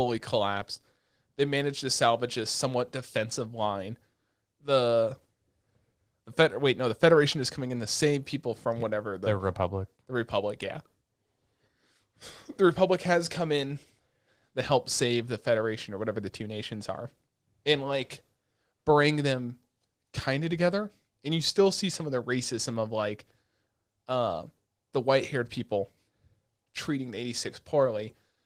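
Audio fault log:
No faults heard anywhere in this speech recording.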